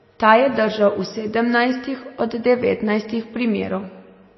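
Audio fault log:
Throughout: likely MP3 compression. The speech sounds watery and swirly. Weak frequency lines drop in and out between frames. Nothing is heard above 5.8 kHz, so the treble is dull. The damage is plainly audible, which fits a low bitrate near 24 kbps.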